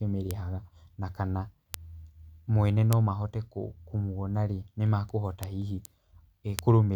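Speech, interrupted by five bit error spikes at 0.31, 1.74, 2.93, 5.43 and 6.59 s: isolated broadband ticks, peaking about −4 to −10 dBFS, from flipped bits. Unlike dropout clicks, the sound never pauses.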